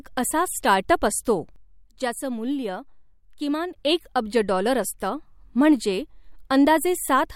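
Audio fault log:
1.56–3.76 s, sudden gain jump: after "अप असतो", speech and noise floor drop about 8 dB together instantly rather than fading, likely from an unramped gain change.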